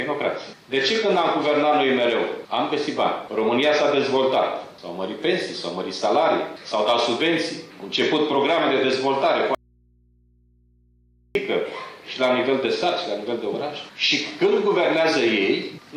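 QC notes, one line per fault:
9.55–11.35 s, audio dropout to a faint residue: the signal cuts out abruptly for about 1.8 s, leaving only mains hum roughly 40 dB below the normal level. The hum points to an open input still live downstream, likely a momentary loss of the source connection, then the sound returns mid-flow.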